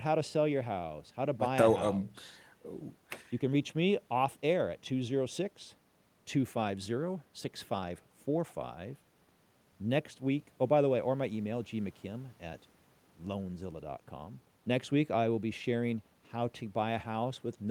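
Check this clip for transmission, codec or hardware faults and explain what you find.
Nothing stood out on listening to this speech recording.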